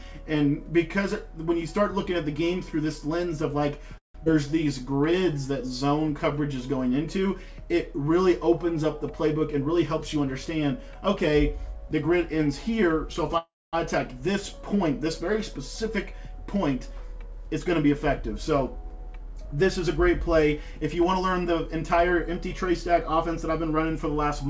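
At 3.98 s the audio stops for about 0.19 s. A short fill fades into about 0.14 s of silence, and the sound then resumes from where it stopped. This is a call audio freeze. The likely cause is delayed packets draining the jitter buffer, which made the receiver stretch the last sound into a fading fill. Nothing is lost; a gap is inserted instead. A second freeze starts at 13.38 s and lasts about 0.37 s, with about 0.23 s of it silent.

At 4.24 s there is a skip ahead. Roughly a tenth of a second of audio is dropped. The two sides are joined with only a tiny bridge of about 13 ms, so the sound jumps forward abruptly. Some of the delay added by the first freeze is taken back here, because later audio was already queued.

From 4.34 s to 5.48 s comes a jitter buffer slow-down. The buffer was running low after the disruption. To rebuild its reserve, the receiver repeated single pitch periods over and over, adding about 97 ms. 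Playback runs at about 92 percent speed with unchanged pitch. Sounds are drawn out, and there may be a faint warble.

A jitter buffer speed-up runs from 9.09 s to 11.49 s at about 107 percent speed, removing roughly 0.2 s. It happens twice more: from 15.83 s to 19.65 s at about 105 percent, removing roughly 0.2 s, and from 20.06 s to 23.63 s at about 104 percent, removing about 0.15 s. Each time the buffer likely held excess audio. The receiver cut out short slices of one or a few pitch periods in quick succession. The pitch stays the same, but the sound runs faster, hurried in the first two. Throughout, nothing is heard above 8 kHz, which fits a wideband call codec such as G.722.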